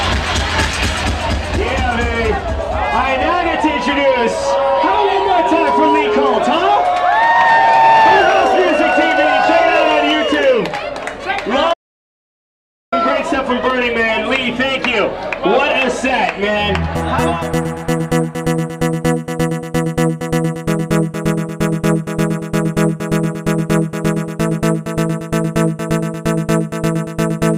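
An audio dropout to silence runs from 11.74 to 12.92 s, about 1.19 s of silence with no room tone, unlike a quiet passage, likely from lost input.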